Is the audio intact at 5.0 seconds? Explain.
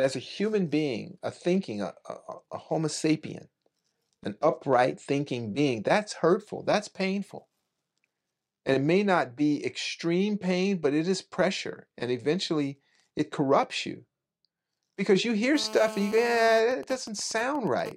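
Yes, the speech at 5.0 seconds is intact, with no audible dropout, distortion or other fault at that point.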